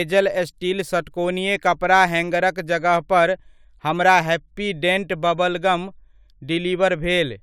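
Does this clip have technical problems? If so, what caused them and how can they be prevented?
No, nothing in this speech recording stood out as a technical problem on listening, so there is nothing here that needs a cause or a fix.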